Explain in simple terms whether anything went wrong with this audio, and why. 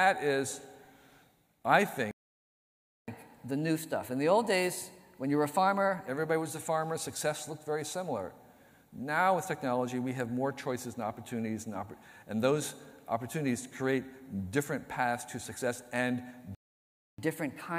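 Playback stall, from 2.11 to 3.08 s and again from 16.55 to 17.18 s: the sound cuts out mid-flow into silence, for just under a second the first time and about 0.64 s the second. The likely cause is the player running out of audio data, or getting held up, so it had nothing to send to the speakers until it recovered, after which the sound resumes.

Catch-up at higher speed, from 3.08 to 6.08 s and from 17.18 s to the end: right after each stall, the sound runs fast and slightly high-pitched. The first time it plays at 1.1 times normal speed, about a semitone and a half sharp, for three seconds before settling back. The second time it plays at 1.15 times speed, about two semitones sharp, and is still rushing when the clip ends. The player is squeezing its backlog through faster to win back the time lost in the silence.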